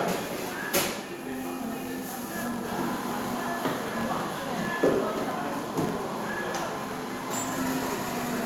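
From start to finish the audio carries a fine, regular ticking that fuses into a low buzz at about 46.9 Hz, the signature of a filter restarted on every block. The filter discards its memory at each block boundary, so every block opens from silence with a tiny transient, a rate that fits a 1024-sample block. The buzz swells and fades with the sound's level. A waveform shows evenly spaced small discontinuities, and a spectrogram shows faint vertical striations at that spacing.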